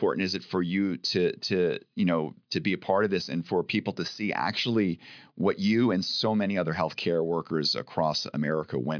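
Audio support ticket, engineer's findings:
No audible faults found; nothing to escalate.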